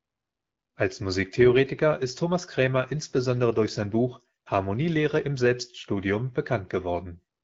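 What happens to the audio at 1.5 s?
Nothing goes wrong at 1.5 s; the speech there passes through the AMR wideband (HD Voice) codec at 12.65 kbit/s with only the light coding damage expected at that rate, and no fault breaks into the sound at that moment.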